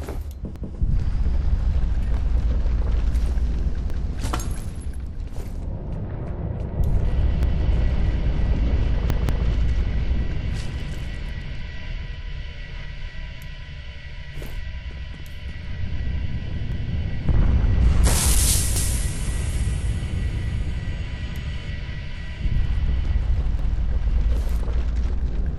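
Repeated buffers occur at 0.56, 3.90, 7.43, 9.10, 16.72, 18.76 and 23.59 s. Each time, late data makes a 186 ms stretch (fitting an 8192-sample buffer) replay once, or twice at 9.10 s, with hard joins. Unlike a dropout, nothing goes silent. The sound audibly stutters.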